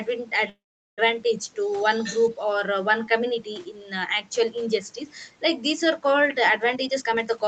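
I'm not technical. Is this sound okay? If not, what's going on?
No. From 0.49 to 1.00 s the speech stops and a brief buzz fades into about 0.4 s of silence, then resumes where it left off. This call audio freeze likely happened because delayed packets left the receiver with nothing to play.

From 2.03 to 2.31 s a second, fainter voice is heard underneath. This is likely the other side's voice leaking through: their audio from a loudspeaker wasn't fully removed by echo cancelling.

From 6.70 s to the end, the speech sounds rushed, about 1.3 times normal speed at the same pitch. This jitter buffer speed-up cut roughly 0.2 s of tiny pieces to catch up after a delay.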